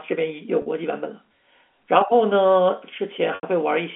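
A short held, buzzy tone at 0.62 to 0.66 s, and a longer one at 3.35 to 3.43 s that fades to silence before speech returns, come from packet loss with pitch repetition. About 40 ms and 80 ms went missing, and the receiver looped the last pitch period to cover each gap.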